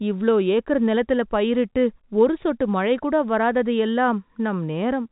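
No technical faults occur in this speech recording, which carries the narrow band of a fixed-line telephone call.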